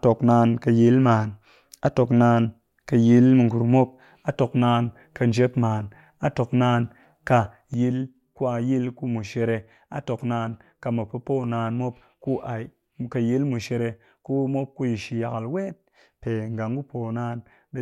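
A speech clip with a sudden gain jump at 7.74 s: the level drops by about 6 dB in one step and stays down to the end, background noise included. It's likely a gain setting or bit shift applied without any ramp.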